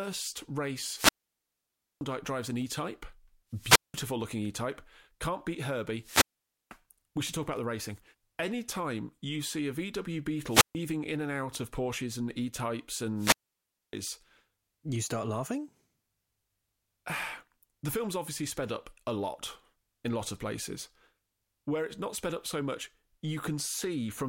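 Wireless microphone squelch dropouts occur at 0.91–2.04 s, 3.52–4.05 s, 6.00–6.78 s, 10.46–10.75 s and 13.15–13.95 s. Each time the FM radio link fades, static swells, and the receiver's squelch mutes the speech for 925, 186, 496, 140 and 611 ms before it returns.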